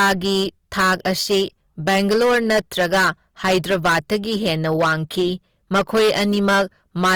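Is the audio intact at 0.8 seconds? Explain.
No. Hard clipping is present at 0.8 s and runs through the whole clip. The speech is driven about 16 dB past what the signal path can carry, so a large share of samples, around 15 percent, hit the ceiling and are sliced flat. Those squared-off peaks throw harmonics high into the spectrum, and at this level of overload every loud syllable carries a harsh, buzzing fuzz rather than occasional crackle.

Also present at 0.8 s and throughout is plainly audible coding damage: the speech sounds rough, grainy and noisy instead of clean, while the band stays wide, with content reaching about 20.2 kHz. This points to Opus compression as the likely cause, in its music (CELT) mode at a rate that fits roughly 24 kbps. With too few bits, the encoder preserves each band's energy but fills in detail by copying lower bands or injecting noise, trading clarity for texture.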